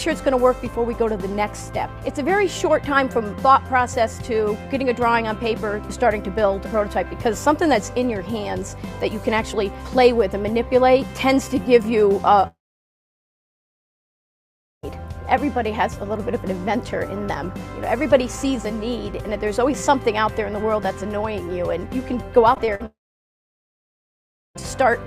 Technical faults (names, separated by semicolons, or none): long network dropout; repeated packet loss (robotic sound)